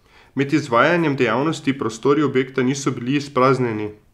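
No technical faults can be heard anywhere in the recording. There is nothing in it to place on a timeline.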